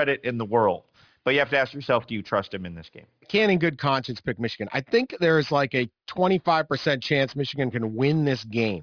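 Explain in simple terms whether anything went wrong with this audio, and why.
Aliasing runs through the whole clip. The speech was converted to a lower sample rate without first removing the high frequencies, so everything above about 5.5 kHz folds back as false, unrelated tones. S and sh sounds turn gritty and metallic, which points to a drop to roughly 11 kHz sampling.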